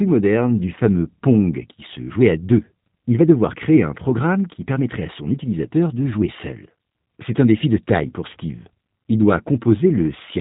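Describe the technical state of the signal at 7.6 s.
G.729 codec coding is present at 7.6 s, as it is across the whole clip. The speech is rebuilt from a vocal tract filter, a pitch predictor and sparse pulses at a rate that fits 8 kbit/s. Nothing passes above 3.8 kHz, and the voice sounds plainly rough and synthetic.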